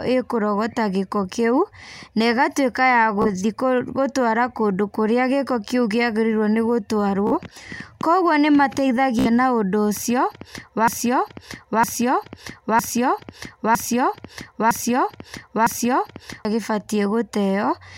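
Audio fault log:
3.22–3.27 s, 7.27–7.35 s and 9.19–9.27 s, Bluetooth stutter: each time a very short slice of speech repeats in a quick burst before the sound carries on. About 31 ms, 46 ms and 61 ms of audio go missing, which fits two, three and four lost radio frames while the receiver replays its last buffer. Unlike a broken-record loop, each burst lasts well under a tenth of a second and buzzes.
10.88–16.45 s, broken-record loop: a fragment of about 0.96 s repeats exactly, back to back, six times, so the same stretch of speech plays over and over for more than five seconds. This points to a stall, likely in the player or stream, that kept sending the last piece it held. Unlike the stutters, each repeat is long enough to be heard as recognisable speech. The speech that should have played in that span never arrives.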